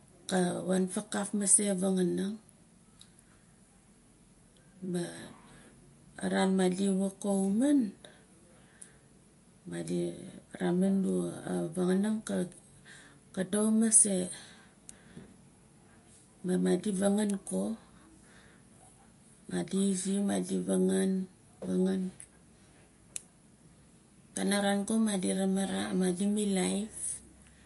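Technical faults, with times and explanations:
Throughout, MP3 compression: speech is watery and swirly with nothing above 11.3 kHz, likely from a low bitrate near 48 kbps zeroing weak frequency lines.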